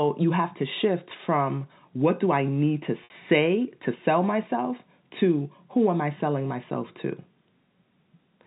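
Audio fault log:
3.04–3.10 s, packet loss with pitch repetition: the speech briefly sticks on one buzzy, held tone, thins out and then picks up again with a quick blend. About 60 ms of audio went missing, which fits three 20 ms packets. The receiver filled the gap by looping the last pitch period and fading that copy down over roughly 50 ms, then cross-faded back into the real speech. The narrowband G.711 telephone sound carries straight through the repair.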